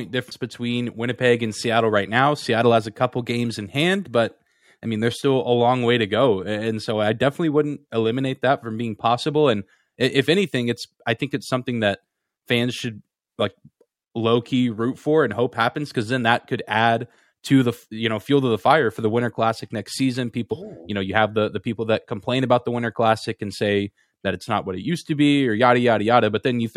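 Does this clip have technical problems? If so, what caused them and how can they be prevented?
Yes. At 0.30 s, several whole frames of the compressed audio were never played, either because they were missing from the file or because the decoder rejected them as damaged. The stretch lost is roughly 150 ms, about seven frames of about 23 ms each, so the speech jumps forward abruptly. At the join a small piece of speech is simply gone. To prevent this compressed frames skipped fault, store and transfer the file with integrity checks and re-encode from an intact source when a copy is damaged.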